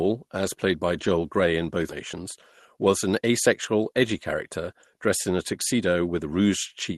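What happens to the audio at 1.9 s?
At 1.89 to 1.91 s, playback does a skip ahead. Roughly a second of speech is discarded, most likely because the call's jitter buffer overflowed and threw away queued audio to catch up with packets already waiting. Nothing fills the gap. The sound before the jump is spliced almost directly onto the sound about a second later, so the speech lurches forward abruptly, with the missing portion simply absent rather than replaced by silence.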